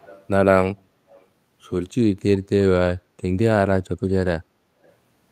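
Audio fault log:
0.00–0.24 s, 1.09–1.26 s and 4.83–4.91 s, echo leak: a faint copy of the speech trails 314 ms behind, fainter each time. It's likely loudspeaker pickup slipping past the echo canceller.
3.02–3.17 s, background gated by the echo canceller: room sound dips about 6 dB for roughly 150 ms while the canceller clamps the mic, then comes back.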